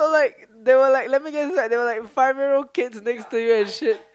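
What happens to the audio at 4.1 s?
Nothing goes wrong at 4.1 s: the speech runs through that moment intact, with no dropout, click, or distortion.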